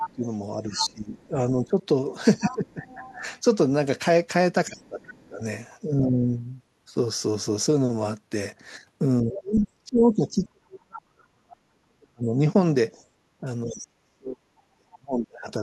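From 0.0 to 3.13 s, a second voice sits under the speech at about 10 dB down. It is the other side's voice leaking through, likely loudspeaker echo the canceller failed to remove. Over the same span to 6.09 s, the speech is suppressed in double talk. It dips by up to about 20 dB, for roughly two seconds in all. The canceller likely turned both voices down together. A faint leak returns at 4.79 to 5.09 s, about 30 dB down. From 9.22 to 15.61 s, suppression deepens to about 40 dB, covering roughly five seconds. Leaked speech appears again at 9.34 to 9.67 s, about 15 dB down, and at 13.68 to 13.87 s, about 20 dB down. At 12.94 to 13.06 s, the room sound drops by about 8 dB. This is background gated by the echo canceller, clamping the microphone while the loudspeaker plays.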